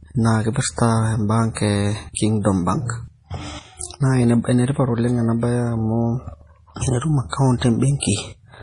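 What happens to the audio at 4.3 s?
MP3 compression is audible at 4.3 s, as it is across the whole speech recording, and is likely the cause of the damage heard there. Nothing above 10.6 kHz is present, where the encoder dropped the treble to save bits. Weak frequency lines flicker in and out between frames, giving a watery, swirly texture, metallic chirps on s sounds and smeared consonant attacks. The heavy degradation fits a very low bitrate of about 32 kbps.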